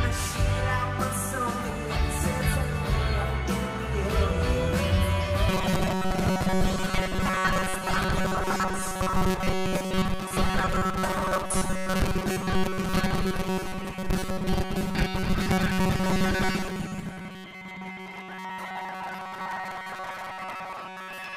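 From 5.49 s to the end, robotic sound from repeated short buffers takes over. It is most likely that new audio arrives too late. Short chunks, about 5.3 ms each, repeat in its place for most of the stretch. This imposes a rigid, metallic 188 Hz buzz.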